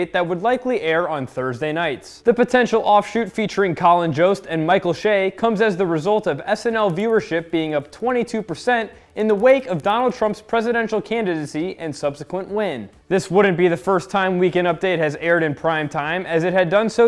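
Resampler restarted on every block, from 6.4 to 10.5 s: the converter, apparently halving the rate from 48 kHz to 24 kHz, processes each 100 ms block in isolation, forgetting the samples that came before and after. At every block boundary its filter is working from missing or wrong neighbours, so a small error appears there, heard as a steady ticking at 10 Hz that rides on the sound and vanishes where the signal drops away.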